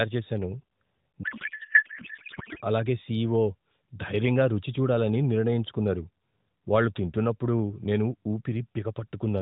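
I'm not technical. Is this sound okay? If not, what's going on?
No. From 1.24 to 2.62 s the speech turns into garbled, warbling noise. This is a codec payload misread: the phone-style AMR codec's data was packed one way but unpacked another.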